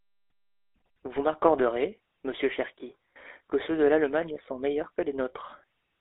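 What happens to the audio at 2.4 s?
At 2.4 s the speech sounds buzzy and gravelly, thin and boxed in, with nothing above about 3.5 kHz and little below 300 Hz. This is GSM full-rate codec damage, present throughout the clip: the voice is rebuilt from a vocal-tract model driven by sparse regular pulses, consistent with a 13 kbps stream.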